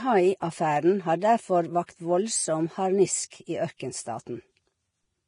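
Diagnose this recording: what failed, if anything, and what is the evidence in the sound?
The speech is hissy and grainy throughout, with roughened tones, blurred attacks and nothing above 10.5 kHz. At the codec stage, this is likely heavy Vorbis compression. A low bitrate, consistent with about 30 kbps, lowers the cut-off and quantises treble detail into noise.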